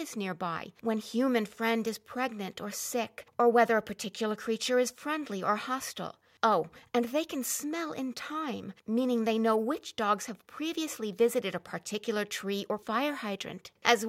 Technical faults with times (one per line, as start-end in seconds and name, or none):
none